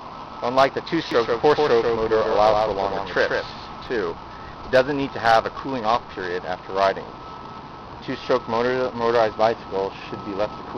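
From 1.11 s to 3.87 s, the audio plays twice. A second copy trails the first by roughly 150 ms, about 5 dB quieter. It has no decay or room colour. Both ends are abrupt. This doubled audio track likely comes from a slower second capture path.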